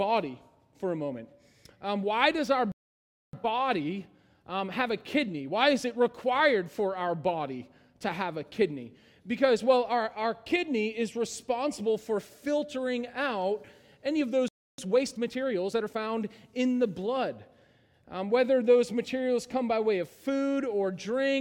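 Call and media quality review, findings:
Playback stall, 2.72–3.33 s (0.61 s) and 14.48–14.78 s (0.30 s): output goes fully silent mid-flow, longer than a packet-loss gap. Likely a buffer underrun or blocked player thread.

Time-compressed catch-up, 3.33–6.33 s at 1.1x and 14.78–15.98 s at 1.25x: audio hurried, pitch unchanged, unlike a sample-rate error. Player cross-fades out small pieces to shrink backlog.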